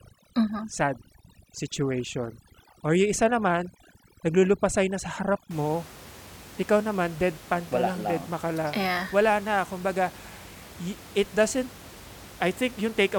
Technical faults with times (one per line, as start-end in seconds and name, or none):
0.00-5.51 overdone noise removal